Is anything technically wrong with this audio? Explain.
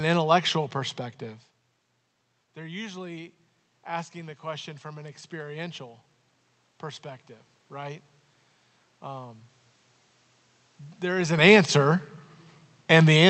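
Yes. From 2.54 to 5.88 s there is automatic gain rising. The input fell by about 18 dB, following the talker moving away near 1.5 s. The gain control slowly added about 6 dB. Voice and room noise swell up together.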